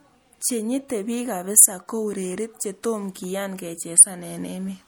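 Throughout the speech, a watery, swirling texture and smeared consonant attacks are plainly audible, with nothing above 19.6 kHz. This likely comes from MP3 compression at around 64 kbps. Unlike a steady low-pass filter, it flickers as weak frequency lines drop from frame to frame.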